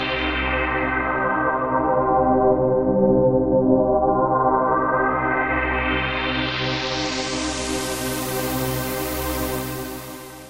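A metallic buzz runs through the whole clip, the level pulsing by about 6 dB around 400 times a second. This is overlap-add ripple: windowed frames were rejoined with an overlap that doesn't sum to constant gain.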